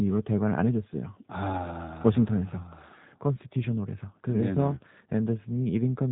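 From start to finish, one channel runs a tiny fraction of a millisecond behind the other, and the two are summed. This is channel delay, or comb filtering. The first cancellation sits near 5 kHz. Below that, the top end sags gently, leaving the speech hollow and phasey.

The speech also passes through a G.729 codec throughout, and the damage is plainly audible. Nothing above 3.8 kHz survives, so the sound is narrow and muffled. The codec rebuilds each frame from a filter model and a few pulses. That gives a rough, synthetic edge consistent with an 8 kbit/s stream.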